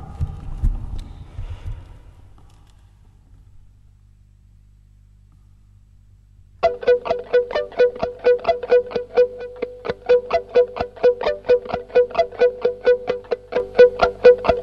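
Right near the end, at 13.6 s, there's a sudden gain jump: the level steps up by about 6 dB in one go and stays there through to the end of the clip. The background noise rises right along with the sound, which tells you it's a digital gain change rather than anything in the source. The likely cause is a gain setting applied instantly, with no ramp to smooth the transition.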